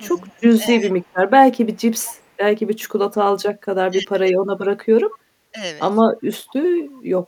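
A speech recording with two related faults from a hands-free call path. Echo leak appears at 0.07 to 0.11 s, 0.69 to 1.16 s, 1.66 to 2.23 s and 5.11 to 5.18 s. Each time a faint copy of the speech trails the original by 220 ms, sitting somewhere around 25 to 35 dB under the direct sound. This points to a loudspeaker at the far end whose echo canceller likely left part of the returned signal in place. The second fault is speech suppressed in double talk, at 0.12 to 1.0 s, 1.98 to 2.08 s, 2.78 to 3.22 s and 3.9 to 4.27 s. Here the speech dips in level, by about 10 dB early on and by roughly 25 dB in the later two stretches. The affected portions run from a tenth of a second to under half a second each. The probable mechanism is an echo canceller that likely could not tell the local talker from loudspeaker echo while both sides were active, and attenuated everything together.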